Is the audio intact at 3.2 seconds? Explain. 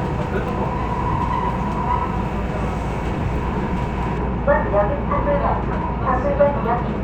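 Yes, the audio is intact at 3.2 seconds, with no dropout, click, distortion or other fault at that moment.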